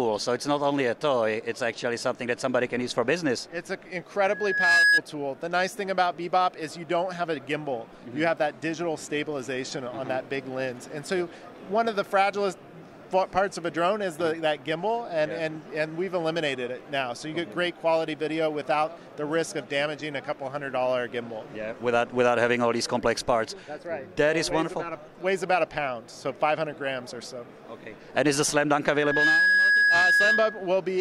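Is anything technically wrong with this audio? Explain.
Yes, there is loudspeaker feedback squeal from 4.20 to 5.01 s and from 28.89 to 30.81 s. A microphone is picking up its own loudspeaker, and near 1.7 kHz the loop gain climbs above one, so that tone feeds itself. Within a fraction of a second it swells into a piercing whistle, standing well above the rest of the sound.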